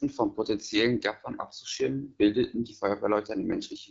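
From start to end, the speech carries the damage of the AMR wideband (HD Voice) codec, running at one of its lowest rates. The sound fits roughly 8.85 kbit/s. The codec models the vocal tract and drives it with pulses up to 6.4 kHz. Above that it fills in shaped noise. At this rate the model is too coarse, so the speech sounds rough and raspy. Nothing is present above about 7.7 kHz.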